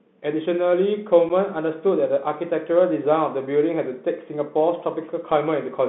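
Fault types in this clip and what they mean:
Bluetooth CVSD headset codec: one-bit adaptive delta coding confines the speech to about 200 Hz to 3.6 kHz, adding plainly audible granular hiss and scratchy, overloaded sibilants.
unconcealed Bluetooth headset packet loss: at 1.29 s a 7.5 ms gap, consistent with a single lost packet, drops the speech abruptly, leaving an unfilled, hard-edged hole.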